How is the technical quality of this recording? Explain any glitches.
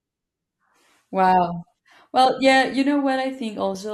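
No technical faults can be heard anywhere in the recording, and the signal stays intact and continuous throughout.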